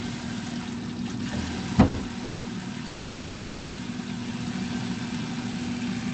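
A short stall from a late packet hits this recording of everyday sounds at 1.88–1.96 s: a packet arrived late, the jitter buffer ran dry, and the receiver held the last sound for 60 ms with a slight buzz or dip before resuming exactly where it left off, losing nothing. Call audio freezes follow at 2.24–2.47 s (210 ms) and 2.87–3.79 s (900 ms). Each time the sound turns into a decaying buzz or hiss rather than silence, then picks up from the same point. Packets were likely delayed in transit, emptying the buffer, so gaps are inserted while nothing is lost. The call codec's band limit of about 8 kHz is present throughout.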